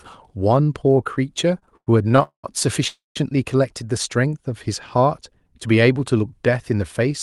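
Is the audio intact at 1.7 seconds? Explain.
No. From 1.59 to 2.23 s the audio shows repeated stalls (stutter): the jitter buffer ran dry seven times, and the receiver stretched the last sound over about 193 ms, with the longest gap 102 ms, dragging rather than dropping anything. Spectrograms show smeared, repeated frames; waveforms, fading plateaus.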